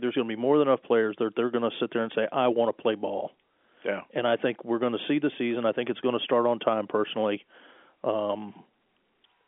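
Nothing stood out on listening to this speech; it comes across as an ordinary telephone-band recording.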